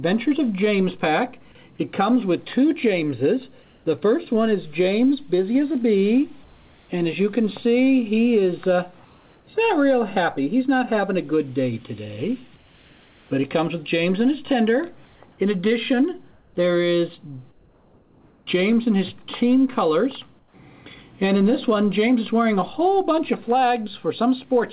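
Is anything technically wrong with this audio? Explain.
Yes. Comfort noise in place of the background appears eight times: 3.62–3.86 s, 6.44–6.89 s, 9.05–9.47 s, 12.56–13.31 s, 15.05–15.2 s, 16.31–16.55 s, 17.51–18.47 s and 20.39–20.54 s. In each gap, the quiet background, already about 31 to 38 dB below the loudest sound, becomes a flat, textureless hiss about 2 to 4 dB quieter. The background's detail returns as soon as the sound resumes. This is likely discontinuous transmission: the sender stops sending audio in the pauses, and the receiver synthesises shaped noise to fill them. Unlike a noise gate or a dropout, the gaps never fall to silence; the real background is replaced by a smooth stand-in. Nothing above 4 kHz is present, which fits the narrowband G.711 A-law call codec.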